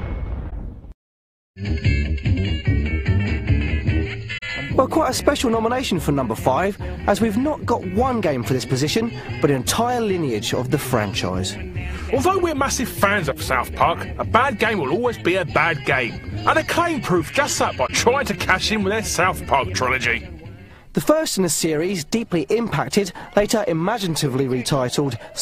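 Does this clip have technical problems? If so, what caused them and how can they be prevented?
Yes. Corrupt frame concealment occurs at 0.49–0.53 s, 4.37–4.43 s and 17.87–17.90 s, each roughly one or two coded frames long. Flipped bits damaged those AAC frames, the decoder caught the errors, and it covered them by muting or filling in from the last good spectrum. Protecting the stream with error checking and a reliable, retransmitting transport prevents this.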